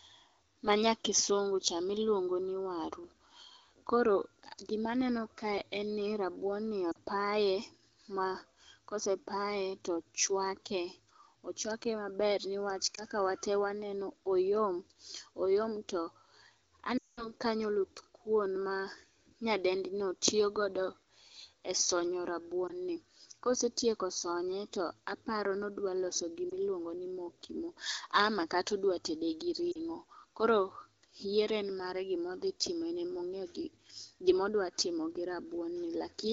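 Short warbles and dips break the speech at 6.91 to 6.96 s, just after "en ni rabuon ni", then at 12.96 to 13.03 s, 22.67 to 22.73 s after "e sonyo", 26.49 to 26.52 s and 29.72 to 29.78 s. At 16.97 to 17.32 s the sound drops to near silence before "kanyo oluth kuon ma", then returns weak. These are lost AMR speech frames. The decoder repeated the last good frame with falling gain, which bridged losses of 20 to 40 ms and dropped to near silence within two frames in a run of about 200 ms. The clear wideband sound elsewhere points to AMR-WB at a mid rate.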